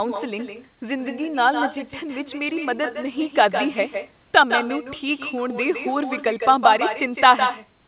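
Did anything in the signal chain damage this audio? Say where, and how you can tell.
Yes. Throughout the speech, every phrase is trailed by a second copy arriving roughly 150 ms later and only about 6 dB down. It is thinner than the direct sound, and it sits on top of the narrowband, 4 kHz-limited call audio. That is echo with no canceller, a call-processing fault: the far end's loudspeaker output is being picked up by its microphone and sent straight back across the network, and no echo cancellation is removing it.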